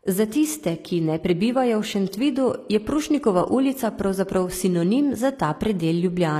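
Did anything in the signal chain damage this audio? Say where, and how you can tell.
Yes, at the codec stage: the damage is likely from HE-AAC compression, plainly audible across the whole speech clip. Treble stops near 14.9 kHz and is rebuilt from copied lower bands, fitting roughly 24 kbps, so harmonics misalign and s sounds turn gritty, metallic or lispy.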